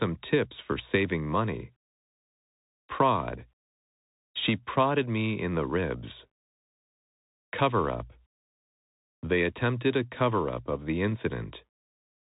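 From start to end the speech carries Bluetooth CVSD headset codec damage: content stops near 3.8 kHz, a hard ceiling on a spectrogram, while loud high sounds outrun the adapting step, s sounds turn scratchy, and granular hiss fills the waveform's quiet gaps, consistent with a 64 kbps one-bit stream.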